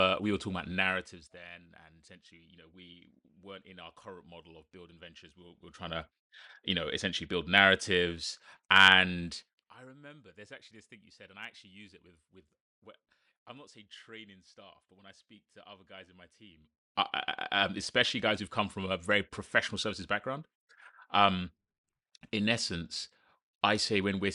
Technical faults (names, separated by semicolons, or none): none